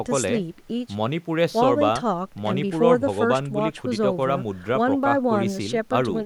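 No technical faults can be heard anywhere in this recording.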